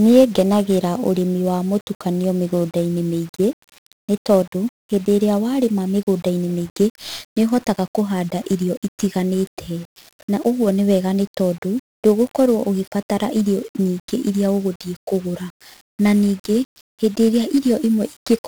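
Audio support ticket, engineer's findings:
1-bit DFPWM compression, whole speech clip: dense fuzzy crackle riding on the signal, treble buried under broadband hiss. One-bit-per-sample delta coding steering an adaptive level. Heavy damage, consistent with roughly 48 kbps. Noise tracks the signal rather than sitting as a steady floor, unlike added white noise.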